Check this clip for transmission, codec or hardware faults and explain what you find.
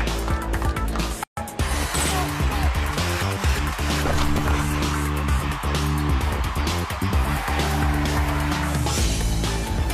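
There is one fault. From 1.24 to 1.37 s the sound drops into a silence of 136 ms, with its edges softened by the codec, and then resumes exactly where it broke off, with nothing lost. This is a gap at a join of encoded pieces. Two separately encoded segments were joined without trimming, so the first encoder's padded final frame and the second encoder's start-up delay both remain as silence inside otherwise continuous sound.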